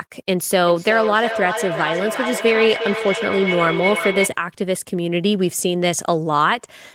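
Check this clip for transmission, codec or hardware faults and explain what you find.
There is one fault, a feedback howl, from 0.67 to 4.41 s. Two devices in the same room share the call, so sound from one loudspeaker reaches the other microphone and comes back louder on each pass. The loop favours a band around 2 kHz, so a tone grows there. The loop's delay is roughly 400 ms. At its peak it sits about 6 dB below the speech. It stops at 4.41 s, when the loop is broken.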